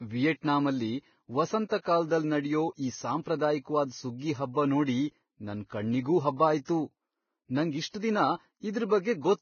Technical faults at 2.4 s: Vorbis compression

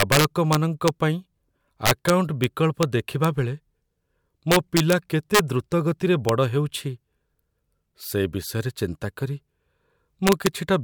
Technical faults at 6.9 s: none

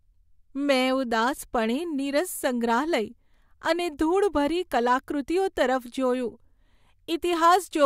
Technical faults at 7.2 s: none

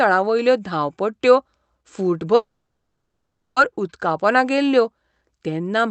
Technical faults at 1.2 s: none

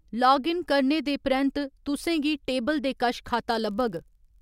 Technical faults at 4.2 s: block size mismatch (padded)

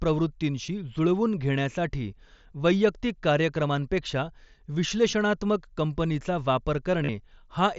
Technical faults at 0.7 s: concealed Bluetooth headset packet loss

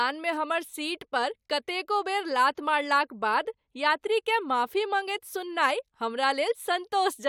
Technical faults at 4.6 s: none

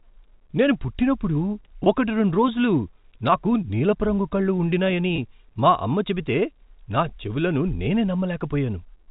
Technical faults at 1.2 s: none

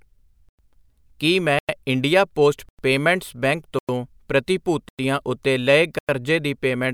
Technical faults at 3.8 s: gap between chunks

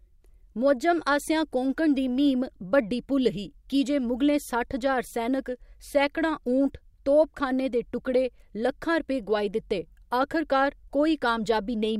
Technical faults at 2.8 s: none

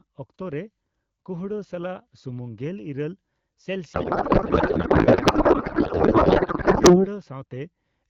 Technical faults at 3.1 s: none

